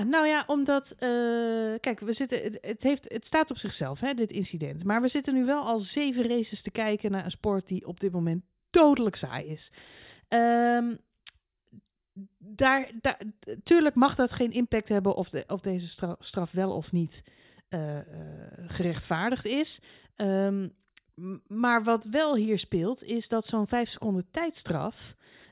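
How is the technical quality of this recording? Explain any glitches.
The speech recording is technically sound, with no dropouts, distortion or other glitches audible at any point.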